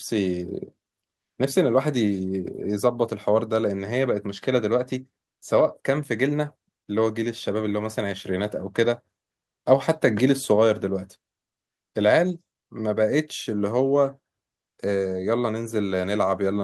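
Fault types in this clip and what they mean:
No technical faults can be heard anywhere in the speech recording; the signal stays steady and intact throughout, with no interruptions or damage to the audio path.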